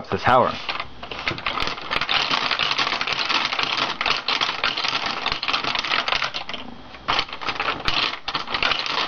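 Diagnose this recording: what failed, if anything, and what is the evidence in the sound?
Nothing in this recording points to a failure at any stage of the chain. No event stands out in the sound that would mark a problem in the wiring, conversion, processing, transmission, storage or playback.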